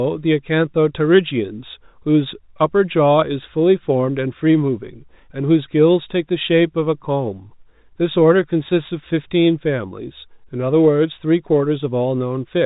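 Speech carried over G.711 telephone coding, with its 4 kHz upper limit and the faint level-following quantisation hiss sitting about 38 dB below the signal, and nothing in the audio calls for attention.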